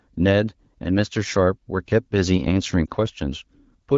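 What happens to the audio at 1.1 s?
Nothing goes wrong at 1.1 s: the speech carries on intact through the AMR wideband (HD Voice) codec at 12.65 kbit/s, with no dropout, click or distortion at that point.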